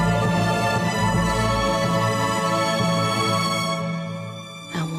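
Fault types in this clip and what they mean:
Compressed frames skipped: a run of compressed frames was missing or rejected as damaged by the decoder, so at 0.84 s the audio jumps ahead about a fifth of a second, which fits roughly five 46.4 ms frames.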